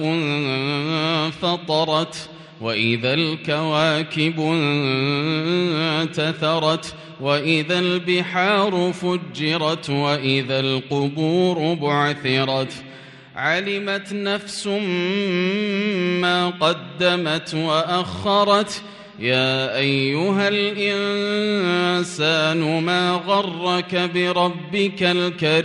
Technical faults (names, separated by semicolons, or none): none